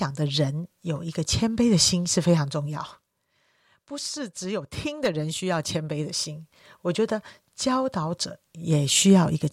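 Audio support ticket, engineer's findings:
No faults found in the speech audio; engineer's findings: nothing to report.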